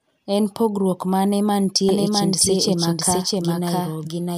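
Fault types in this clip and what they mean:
Doubled audio track: from 1.89 s, right after "pogruok mane", a second full-band copy of the speech runs about 0.7 s behind, roughly as loud as the original, starting abruptly with no decay and lasting to the end, likely from capture through a slower path.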